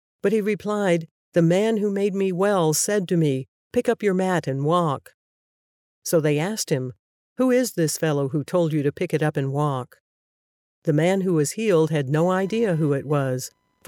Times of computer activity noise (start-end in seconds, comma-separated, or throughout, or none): 12.20-13.87